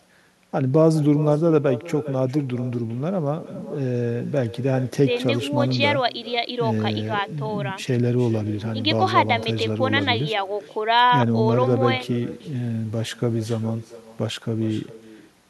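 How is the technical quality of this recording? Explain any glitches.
The recording has one fault, and it runs through the whole clip. Throughout, echo with no canceller trails the speech. A loudspeaker on the far end feeds a microphone, and nothing removes that return. Each phrase comes back roughly 400 ms later, about 16 dB quieter, sounding thinner.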